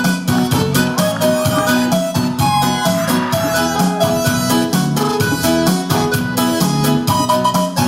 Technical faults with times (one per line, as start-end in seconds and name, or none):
none